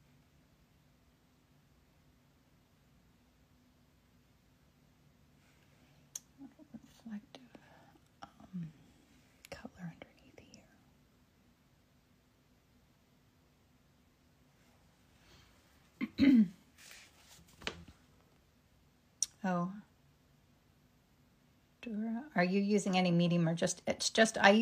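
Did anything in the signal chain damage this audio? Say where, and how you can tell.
No, nothing in the signal chain audibly damaged this audio. No stage, from the analogue wiring through to playback, leaves anything in the sound that points to a problem.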